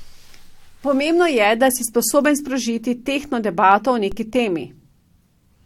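At 4.12 s the signal's zero line jumps to a new offset, a DC step, and then drains away as though through a high-pass around 5 Hz. That sudden shift registers as a single low thump while the speech continues unchanged.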